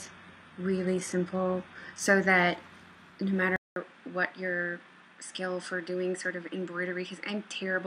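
Adaptive stream starting at a low bitrate, 0 to 2.0 s: the opening treble sounds thin and synthetic, pointing to a bitrate near 16 kbit/s, before quality jumps up seamlessly once the player has measured the connection.

At 3.56 s a 0.2 s silence precedes dull, boxy sound cut off near 10.3 kHz, a few decibels quieter and with new background noise, most likely an input switched to a poorer device.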